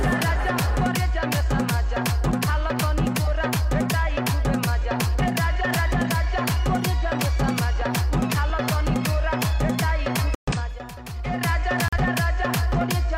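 At 10.35 s the sound drops into silence. The gap lasts until 10.53 s, about 0.18 s. A second gap follows at 11.88 s and ends at 11.98 s, about 0.1 s. Both are a corrupt frame muted. Damaged compressed frames were rejected by the decoder, and the player filled their slots with silence. Each hole starts abruptly, and its length points to a handful of frames. The sound resumes on time afterwards.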